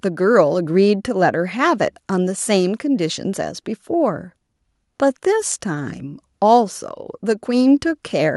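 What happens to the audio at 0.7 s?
Nothing goes wrong at 0.7 s; the speech there plays through intact, with no dropout, click or distortion.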